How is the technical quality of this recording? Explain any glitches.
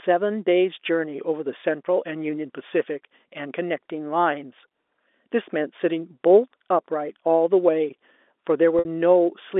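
The recording carries one audible glitch, heard through a telephone-band channel with the narrow, G.711-style bandwidth of a fixed line. Near the end, from 8.79 to 8.85 s, there is packet loss with pitch repetition. About 60 ms of audio went missing, which fits two lost packets. The receiver filled the gap by looping the last pitch period and fading it down, so the sound briefly holds with a buzzy, frozen quality. A spectrogram shows flat, unchanging harmonic bands there. The waveform shows identical repeating cycles shrinking in amplitude.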